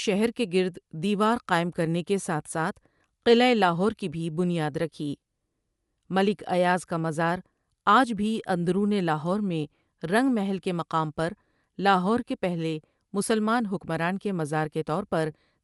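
Throughout, the speech is band-limited above 11.6 kHz with a breathy, grainy top, likely Bluetooth LC3 compression near 48 kbps.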